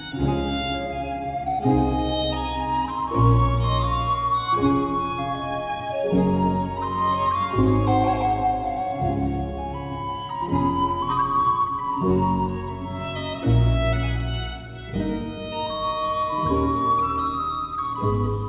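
No technical faults can be heard anywhere here.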